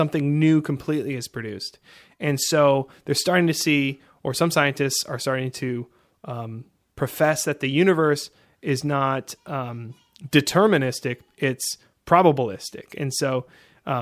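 No technical faults can be heard in the speech at any point.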